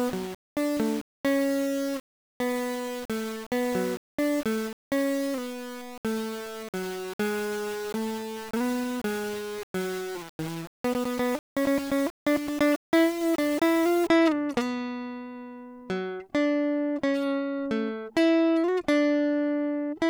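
From 0.0 to 14.07 s the music sounds grainy, likely low bit depth without dither; the waveform shows stair-steps, the spectrogram noise tracking the music.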